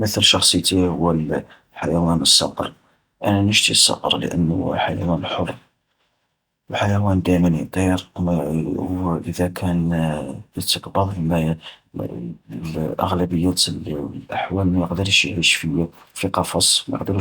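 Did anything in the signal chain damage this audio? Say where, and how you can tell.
No, no damage detected.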